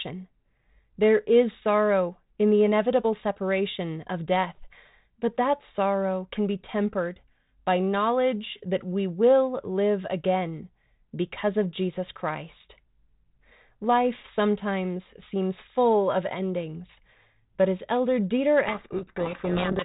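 Right near the end, from 18.68 s through to the close, there's a codec payload misread: the G.726 code words get unpacked with their bit order flipped, so the decoder builds the wrong samples and the speech drowns in harsh, grinding distortion. Before that, the 32 kbit/s G.726 carries only light coding grit.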